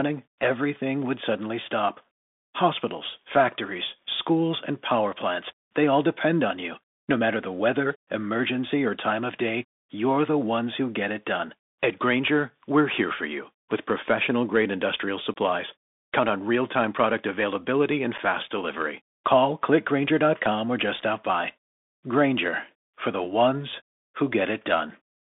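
Speech heard through a Bluetooth CVSD headset codec for its full length. The band runs only from about 200 Hz to 3.6 kHz, and the codec damage is plainly audible. The sound points to the 64 kbps one-bit delta scheme, whose step size can't keep up with fast, loud high content, so s sounds turn scratchy and a granular hiss sits under the voice. That grainy, slope-overloaded texture is what separates it from ordinary clean telephone band-limiting, which narrows the sound without roughening it.

There are also two moments of unconcealed Bluetooth headset packet loss. Right after "with professional grade industrial", a hard gap runs from 15.34 to 15.36 s, about 22 ms, or a few packets. Another short hole comes at 18.18 s, about 7.5 ms or roughly one packet, after "time product availability and". These are abrupt holes. Nothing is repeated or smoothed over to fill them, and that is what distinguishes them from concealed loss or from dropouts in the recording itself.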